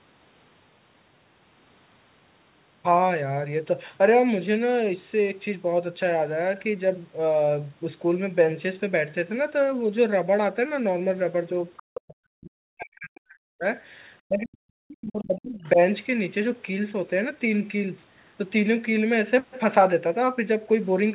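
From 11.77 to 11.83 s, a brief scrap of a second voice comes through, about 25 dB below the main speech. It is other side's voice leaking through. Its likely cause is a loudspeaker echo that the echo canceller did not fully remove from the microphone. It is faint and very short.

From 11.91 to 13.65 s, the speech is suppressed in double talk. Both sides were likely talking at once, and the echo canceller turned down the whole signal. The speech falls away in pieces, by as much as 40 dB at its deepest. Across the stretch it is cut for roughly one and a half seconds.

From 14.2 to 15.79 s, the same suppression returns. The speech again dips and drops out in fragments, down by as much as 40 dB. Again it is cut for roughly one and a half seconds. Inside this stretch, from 15.64 to 15.69 s, another short scrap of the other side's voice leaks through, about 30 dB below the speech. All of it is heard through the call path's narrow band, with nothing above 4 kHz.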